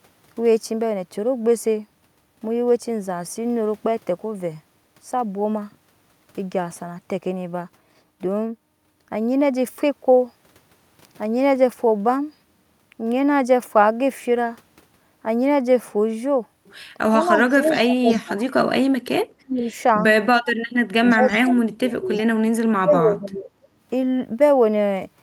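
Late in this speech recording, the voice dips by as much as about 30 dB or breaks up in pieces at 17.12–18.47 s, 19.43–19.73 s, 20.97–22.12 s and 22.77–23.5 s. This is speech suppressed in double talk, likely from an echo canceller that could not tell the near talker from loudspeaker echo while both sides spoke and so turned everything down. In and around these stretches, a faint copy of the voice trails 325 ms behind at 17.36–17.78 s, 18.09–18.21 s, 21.1–21.35 s and 22.16–22.23 s, about 20 to 25 dB below the speech. This is echo leak, likely residual loudspeaker pickup that the far end's canceller failed to remove and sent back down the line.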